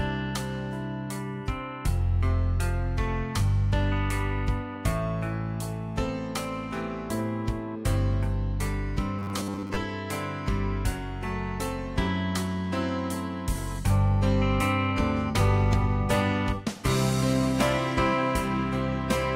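From 9.19 to 9.76 s the sound turns into a rigid, metallic buzz: robotic sound from repeated short buffers. The likely cause is audio arriving too seldom, so the playback side keeps looping the last short block while the incoming material is skipped, which here happens for most of that stretch. The loop imposes a fixed 100 Hz tone, which fits a block length of about 10 ms, and the sound's shape survives only roughly underneath it.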